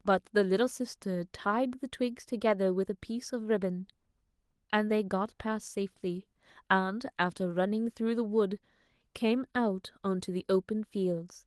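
Nothing goes wrong anywhere in this speech, and the Opus voice compression it passed through leaves only the light touch you'd expect at around 20 kbps.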